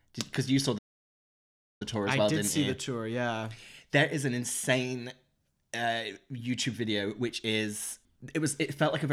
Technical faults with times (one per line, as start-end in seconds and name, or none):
0.78-1.82 playback stall